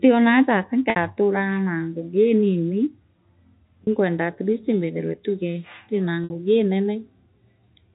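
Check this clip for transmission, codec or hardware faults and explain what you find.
The speech has three brief dropouts, heard against the faint quantisation noise of its G.711 telephone-band coding. Packet loss with pitch repetition occurs at 0.90–0.96 s, 3.84–3.87 s and 6.24–6.30 s. The receiver bridged each gap of 60, 30 and 60 ms by repeating the last pitch period and fading it out over about 50 ms. The 30 ms gap sounds like a short, slightly held, buzzy note before the speech resumes. The two 60 ms gaps fade into silence, and the speech returns with a short cross-fade.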